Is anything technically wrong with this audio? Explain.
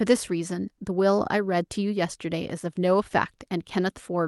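No, the speech arrives through a call codec path whose high end stops at around 12 kHz, which fits Opus at a moderate bitrate, and nothing in the signal points to a technical fault.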